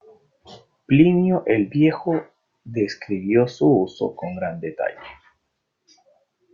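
Nothing goes wrong anywhere in this speech recording, so there's no technical fault to point to.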